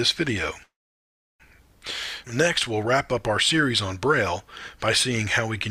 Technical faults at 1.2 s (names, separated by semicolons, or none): call audio freeze